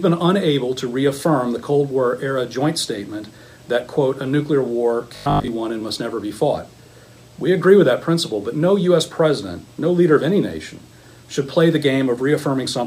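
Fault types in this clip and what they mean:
Robotic sound from repeated short buffers: around 5.16 to 5.48 s the sound turns into a stiff 50 Hz buzz, likely from a 20 ms chunk looping while most real audio gets skipped.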